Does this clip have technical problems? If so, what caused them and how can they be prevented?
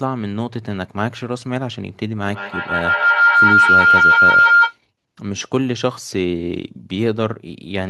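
Yes. Feedback howl from 2.27 to 4.8 s. A microphone-to-speaker loop gains on each pass, building a tone near 1.5 kHz, with the loop repeating about every 150 ms and peaking about 9 dB over the speech. Prevent it by muting duplicate devices sharing a room, or by using headphones.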